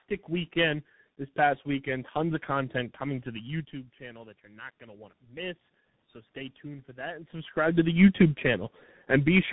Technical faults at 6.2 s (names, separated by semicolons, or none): channel delay (comb filtering); tandem speech coding; automatic gain rising